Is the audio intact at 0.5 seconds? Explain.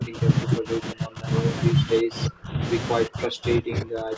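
No. At 0.5 seconds the speech falls inside a stretch of speech suppressed in double talk, running from the start of the clip to 1.29 s. The level dips hard, by roughly 25 dB at its deepest, across about a second in total. The likely cause is an echo canceller facing talk from both ends at once. It cannot tell the local talker from loudspeaker echo, so it pulls both down.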